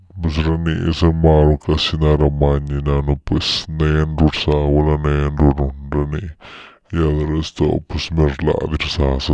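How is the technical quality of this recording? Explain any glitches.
The speech has one fault, present from start to finish: a wrong sample rate. Everything runs at about 0.69 times normal speed and sounds roughly 6.5 semitones low. Speed and pitch drop together, which fits audio recorded at 32 kHz being played back at 22 kHz without conversion. The voice sounds deep, slow and dragging.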